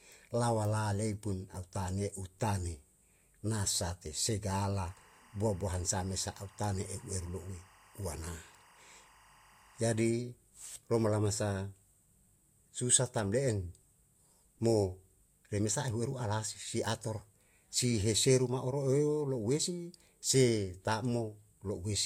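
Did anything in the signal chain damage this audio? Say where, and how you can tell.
Yes, timecode bleed in the analogue wiring: from 4.75 to 10.08 s a chirping warble sits roughly 30 dB below the speech, flipping between tones near 1 and 2 kHz. Unlike steady hum or whine, it repeats at 24 frames per second, the rhythm of linear timecode leaking from a neighbouring line.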